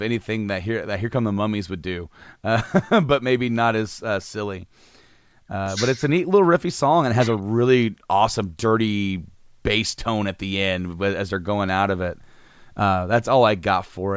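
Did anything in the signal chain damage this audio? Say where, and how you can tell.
No, nothing in the signal chain stood out as damaging this speech on listening.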